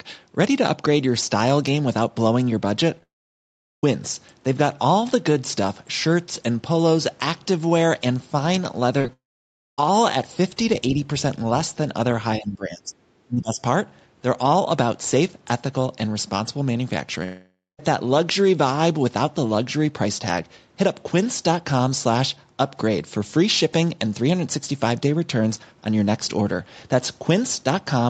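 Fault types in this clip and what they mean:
Repeated packet loss (robotic sound): packets kept going missing in quick succession, and each hole was patched by stretching the sound just before it. You hear this as brief choppy flutters around 2.95 s and 9.0 s, with short bits chopped out each time. The one near 9.0 s is the denser of the two.
Long network dropout: nothing arrived for a good while, so the receiver carried the last sound on as a fading buzz and then went quiet before the audio came back with that part gone. Here that happens from 3.03 to 3.84 s (about 0.8 s lost), 9.13 to 9.79 s and 17.24 to 17.80 s. This is likely a network outage.
Speech suppressed in double talk: the talker's speech gets pushed right down in chunks, from 12.38 to 13.05 s and again from 13.26 to 13.60 s. The deepest dips are around 20 and 25 dB. The likely cause is an echo canceller ducking everything while both ends talked over each other.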